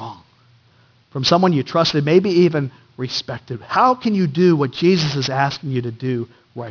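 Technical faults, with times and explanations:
Throughout: aliasing. Resampling without an anti-alias filter, consistent with a drop to 11 kHz, folds content above 5.5 kHz back down, leaving gritty, metallic sibilants fairly close behind the speech.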